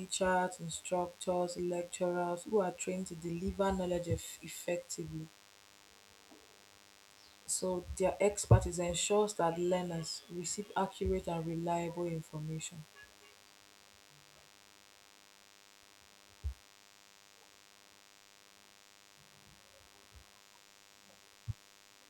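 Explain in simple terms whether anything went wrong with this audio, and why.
A thin, steady buzz sits under the speech for the whole recording. This is DECT cordless phone buzz: a nearby cordless phone or its base sends a radio burst 100 times a second, and the audio circuit turns that into a faint, constant hum.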